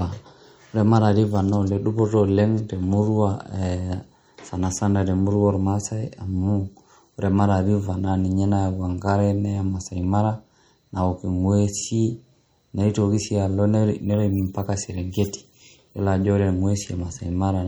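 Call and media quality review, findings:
MP3 compression artefacts throughout speech, plainly audible. Watery, swirly texture; s sounds chirpy and metallic; onsets smeared. Likely a low-bitrate MP3 encode, consistent with around 48 kbps. Spectrogram: hard treble cut-off shelf, flickering holes where weak frequency lines drop frame to frame.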